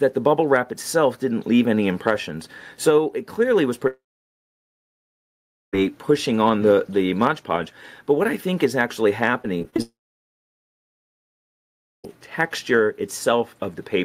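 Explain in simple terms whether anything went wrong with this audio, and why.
Yes, two kinds of fault can be heard.

Long network dropout, from 3.87 to 5.75 s and again from 9.82 to 12.06 s. The audio briefly carries on as a fading buzz, then goes almost silent. This is likely a connection interruption. About 1.9 s and 2.2 s of sound are lost, and playback resumes later without them.

Repeated packet loss (robotic sound), from 9.43 to 9.80 s, just before the second dropout. The sound turns choppy, with pieces missing. Several short holes, none longer than about 25 ms, are patched over, covering roughly a quarter of that stretch. Unlike a dropout, the sound keeps going instead of falling silent.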